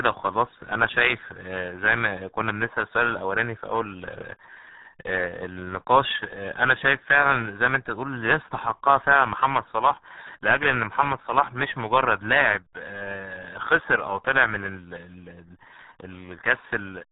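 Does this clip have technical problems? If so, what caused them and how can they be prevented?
Yes. RealAudio 14.4 codec damage runs through the whole speech clip. Nothing above about 3.9 kHz survives, and the heavy coding leaves the speech muffled and gargly, which fits an 8 kbit/s dial-up-era stream squeezing speech into very few bits. To prevent it, encode or re-source the recording with a modern codec at a higher bitrate.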